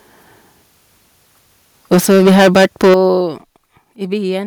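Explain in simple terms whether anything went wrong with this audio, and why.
Between 1.92 and 3.07 seconds the loud parts sound harsh and crackly. This is microphone overload. The loudest moments had their tops sliced off, likely because the microphone was set too sensitive.

The sound then gets abruptly quieter at 1.94, 2.94 and 3.96 seconds. This is the microphone volume being stepped down. The drop at 2.94 seconds is the biggest. The call software likely lowered the microphone after hearing it get too loud.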